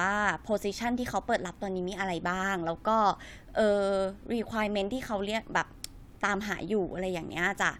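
Nothing in this recording trips up the ear, with no dropouts, clicks, glitches or other technical faults turning up anywhere along the way.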